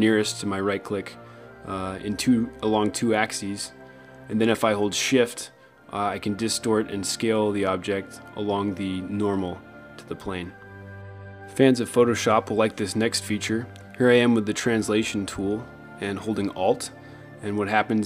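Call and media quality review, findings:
No technical faults were found in the signal at any point in the clip.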